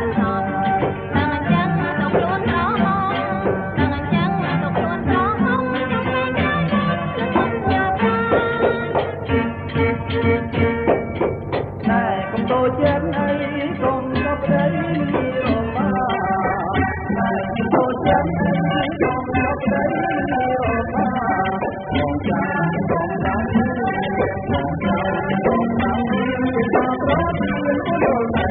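From 15.91 s to the end, the adaptive stream switches to a lower bitrate, as happens when a connection slows. The change is sudden, with no gap. Nothing remains above 4.1 kHz, and codec artefacts thicken, which fits a very low AAC bitrate.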